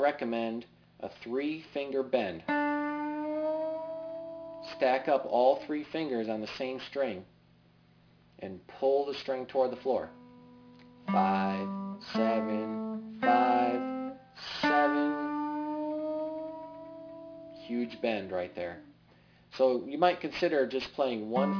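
From the first second to the last, there's aliasing. The audio sounds like it was dropped to a much lower sample rate with no anti-aliasing filter first, which fits a conversion from 48 kHz down to about 11 kHz. Everything above 5.5 kHz has folded back below that point as unrelated tones, sitting around 20 dB under the main signal. You hear it as a gritty, metallic edge on the bright parts, with the top end crowding right up against 5.5 kHz.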